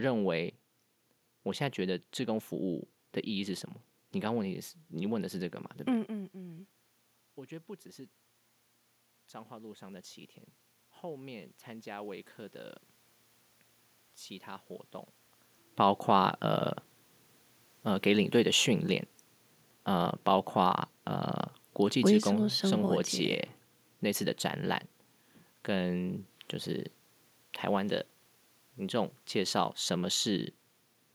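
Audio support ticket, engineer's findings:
Automatic gain falling, 18.08 to 23.04 s: speech level sinks by about 3 dB over roughly 5 s, room noise dropping with it. Probable component: capture-side AGC. Mechanism: input judged too loud or background too strong, gain pulled down gradually, so voice and background fall together. Level shifts near 6 s and 15 s are the talker moving relative to the mic, and the room noise is part of the recording; neither is a system fault.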